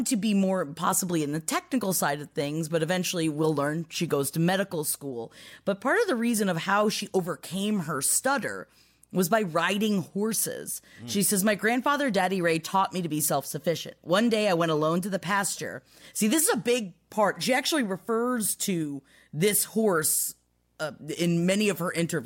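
Speech runs over a steady video or display buzz throughout. It hums at the 60 Hz field rate, well below the voice, as a screen or video cable couples into the audio.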